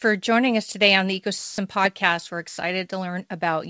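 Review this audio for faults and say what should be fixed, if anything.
Three brief gaps in the speech, at 0.72–0.74 s, 1.38–1.58 s and 2.48–2.58 s, give way to steady, featureless noise before the speech resumes. This pattern points to sound dropped by the voice detector: the sender's detector likely misjudged the sound as background and stopped transmitting, so the receiver filled the 20 ms, 200 ms and 100 ms gaps with comfort noise. The call path, with G.722 limiting content to below 8 kHz, is not involved. Lowering the voice detector's aggressiveness or lengthening its hangover time would keep quiet passages from being dropped.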